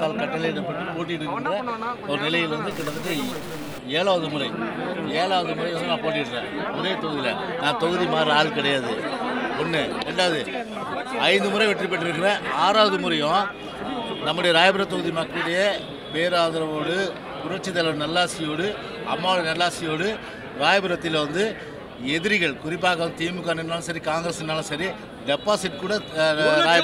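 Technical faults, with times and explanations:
2.71 to 3.79 s, stuck bit: harsh, buzzy distortion that follows the waveform, likely from one data bit held fixed, shifting about half the values by a step around -35 dBFS. Unlike steady hiss, the error changes with the signal's sign, so even small levels fill with noise.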